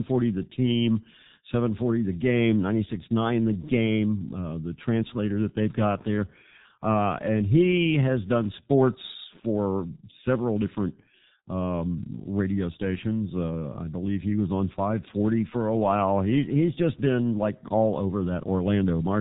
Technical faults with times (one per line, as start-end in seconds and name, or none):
0.00-19.20 G.723.1 codec